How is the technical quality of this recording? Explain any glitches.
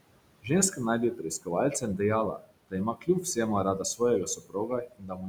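The recording is clearly affected by noise suppressor artifacts throughout, and by the suppressor repeatedly clipping parts of the speech.

The background noise, sitting about 15 dB under the speech, ducks away in the gaps and swells back beneath the talking. These are noise suppressor artifacts. The processor estimates the steady room noise and pulls down each frequency band it judges to be noise, frame by frame, by up to about 21 dB.

Speech cut by the noise suppressor shows up at 0.71 to 0.8 s, 1.15 to 1.48 s, 2.37 to 2.52 s, 2.94 to 3.37 s, and from 4.26 s to the end. In those spans soft sounds and word tails come out swallowed or oddly faint, dipping by about 10 to 20 dB at worst, with the final stretch most affected. The suppressor has mistaken quiet speech energy for background noise and turned it down with the noise. Each earlier lapse lasts a fraction of a second, while the closing one covers well over half a second.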